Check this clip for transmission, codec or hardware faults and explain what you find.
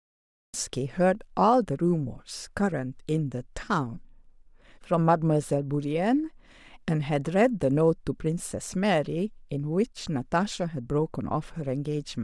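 One fault is present, at the very start of the speech. From 0 to 0.54 s there is digital silence, then the sound begins abruptly mid-utterance at 0.54 s with no natural attack or fade-in. This is a cut-off start: capture or streaming began late, missing the sound's true onset.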